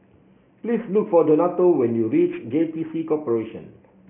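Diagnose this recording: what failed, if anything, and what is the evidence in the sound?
Aliasing from a sample-rate conversion, present throughout the speech. The rate dropped from 16 kHz to 6 kHz with no anti-alias filter first. Content above 3 kHz folds back below it as wrong pitches. Sibilants sound gritty and metallic. The folded energy sits roughly 30 dB under the signal.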